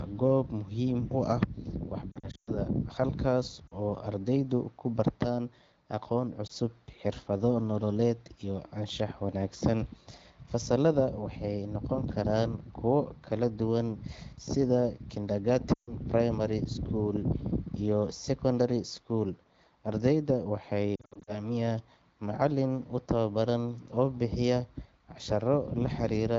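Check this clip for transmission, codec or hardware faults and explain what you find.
Lost AMR speech frames turn up five times: 2.11–2.54 s, 3.68 s, 6.47 s (just before "xirfado nololeed iyo"), 15.74–15.95 s and 20.96–21.52 s. Radio errors corrupted those frames, so the decoder kept replaying the last good pitch and vocal tract settings at falling gain. The single loss comes across as a quick dip or warble, and the paired loss drops to near silence. The 140 ms gap at 15.7 s and the 120 ms run inside the 2.1 s cluster drop the sound to near silence within two frames before it comes back rough. The AMR wideband codec underneath sounds clear, which fits a 12.65 kbit/s mode.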